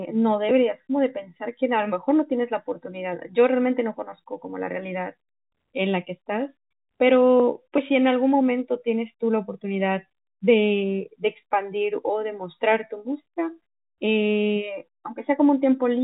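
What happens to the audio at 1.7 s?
Nothing goes wrong at 1.7 s: the speech carries on intact, with only the narrow telephone band of G.711 coding audible there.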